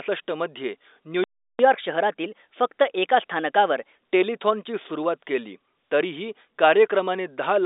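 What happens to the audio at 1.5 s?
At 1.5 s the speech has gone silent. It is a playback stall, running from 1.24 to 1.59 s, about 0.35 s of dead air in mid-flow. The likely cause is the player running out of data or its thread being blocked.

When sound returns at 1.59 s, catch-up at higher speed begins. The player works through its backlog by resampling, so speech runs 1.15 times fast and sits roughly two semitones high. It settles back to normal speed and pitch at 3.95 s.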